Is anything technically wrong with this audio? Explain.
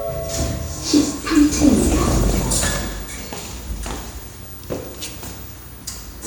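Yes. Between 1.59 and 2.45 s, 4.12 and 4.77 s, and 5.82 and 6.06 s, the audio breaks up with short blips of noise in single sub-bands: DAB burbling. Weak reception, with a bit error rate of around one percent, lets errors through correction, so individual sub-bands jump in level for up to a frame.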